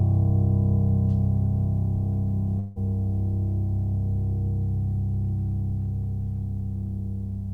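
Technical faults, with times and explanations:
2.59 to 2.79 s, long network dropout: the music smears into a fading buzzy continuation for about 160 ms, then picks up further along with roughly 160 ms of material skipped. This is likely packets lost in transit, with the receiver stretching the last sound to bridge the gap.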